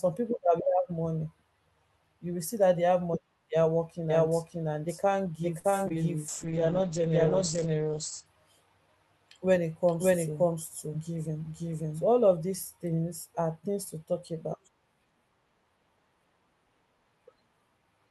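From 4.10 s to 12.05 s the speech is heard twice: a second, full-band copy at about the same loudness trails the original by roughly half a second. It cuts in and out abruptly and carries no decay or room colour. This doubled audio track likely comes from the signal being captured again through a slower path, or from an edit that left two copies out of step.

At 5.59 s a sound is held unnaturally long, with a slight buzz or dip, for 47 ms before the speech resumes where it left off. This short stall from a late packet happened because the packet arrived after it was due. The jitter buffer ran dry, so the receiver stretched the last sound until the packet came. Nothing is lost, but the delay grows by 47 ms.

Two brief smears follow, at 5.70 to 5.74 s and 5.88 to 5.92 s. Each is a 20 ms gap where a tiny fragment can blur or drop out. These are short concealed packet losses: audio that never reached the decoder was replaced by an extrapolation of the preceding sound, then blended back into the real signal.

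From 6.29 s to 8.32 s the speech turns rough and muffled, staying at its worst for about 1.9 s. In this call bitrate drop the encoder fell from 40 kbps to 9 kbps after the bandwidth estimate collapsed. It coded more coarsely and narrowed the audio band from 20 kHz to 8 kHz.

Between 10.88 s and 11.44 s the speech sounds hurried, running at 109% speed with its pitch unchanged. This jitter buffer speed-up trimmed about a twentieth of a second in small pitch-period slices. The receiver was draining surplus buffered audio to bring the delay back down.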